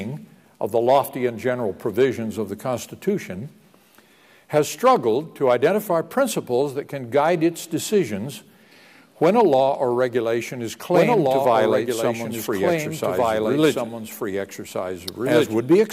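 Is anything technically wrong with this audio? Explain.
Yes. From 10.94 s to the end, the sound has a doubled audio track: a second full-band copy trails the original by about one and a half seconds, around 5 dB quieter. It enters abruptly and carries no decay or room colouring, so it reads as a clean repeat rather than an echo. The likely cause is the same signal being picked up a second time through a slower path, or an edit leaving two copies offset.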